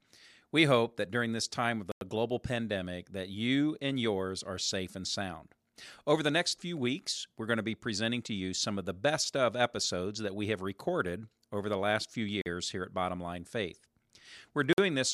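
A Bluetooth stall, likely from interference delaying packets until the headphones' buffer emptied, cuts the speech to silence three times: 1.92 to 2.01 s (96 ms) between "during this time of" and "global pandemic that you", 12.41 to 12.46 s (45 ms) after "over the last few", and 14.73 to 14.78 s (52 ms).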